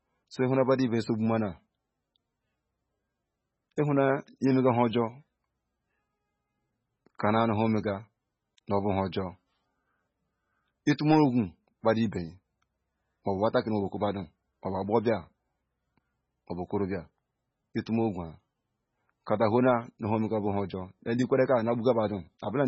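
All the way through, the speech has heavy MP3 compression damage, likely from a very low bitrate: nothing above 7.9 kHz, plus watery, swirly sibilants and smeared consonants.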